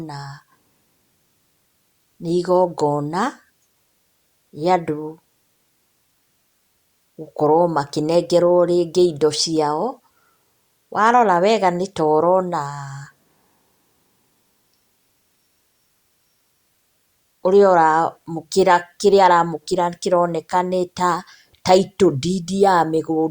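No technical faults can be heard anywhere in this speech recording.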